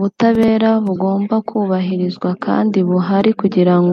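Speech, with plainly audible codec damage throughout: watery, swirly treble and smeared attacks, likely from MP3 compression at a low bitrate around 64 kbps. Compressed frames are skipped at 0.95 s and 3.47 s. The sound jumps ahead with a brief smeared blip, losing roughly 20 ms and then about 50 ms, which fits one and two missing 24 ms frames.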